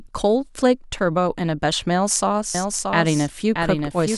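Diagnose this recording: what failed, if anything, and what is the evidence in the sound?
A doubled audio track appears at 2.55 s and runs to the end. From that point a second copy of the speech trails the first by roughly 0.7 s. It sits around 5 dB below the original. The copy is full-band and dry, with no decay or room colour. It enters abruptly, not as a reflection would. The likely cause is the same signal being captured again through a slower path at the capture or routing stage.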